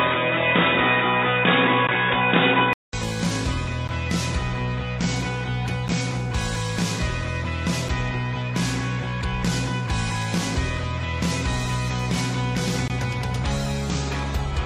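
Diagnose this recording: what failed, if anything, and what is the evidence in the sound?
For the first 2.93 s the sound is dull and boxy with nothing above 3.8 kHz, then a 200 ms gap and it opens up. That's likely the input switched to a poorer device, a driver-level routing change, with a different noise floor and a level shift of around 5 dB.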